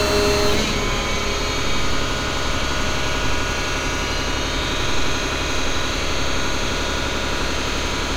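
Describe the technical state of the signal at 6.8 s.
At 6.8 s the signal is intact, with no audible fault in the sound at that moment.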